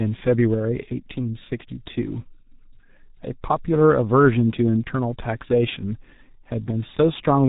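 A speech clip carried throughout by the G.723.1 codec, an early internet-telephony coder that models the voice in 30 ms frames at a very low bitrate, roughly what 6.3 kbit/s would give. It cuts everything above 4 kHz and refreshes its voice model only once per frame, so the damage here is heavy. The speech sounds muffled and hoarse, its consonants smeared into one another across the whole recording.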